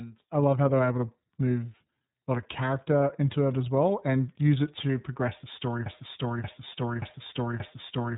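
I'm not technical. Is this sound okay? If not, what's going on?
No. Throughout, the speech has passed through the iLBC codec, a phone-grade compression scheme that drops everything above about 3.8 kHz and rebuilds each 30 ms slice separately. That gives the muffled, slightly rough, synthetic quality you hear.

From 5.86 s, right after "to progress the story", a broken-record loop begins: a 0.58 s fragment repeats four times back to back until the end. The stream likely stalled and kept resending its last piece, so the audio meant for that stretch is lost.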